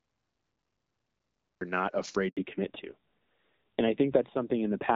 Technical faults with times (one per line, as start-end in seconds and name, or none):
0.00-1.61 cut-off start
2.29-2.37 handover gap
2.37-4.95 fallback to narrowband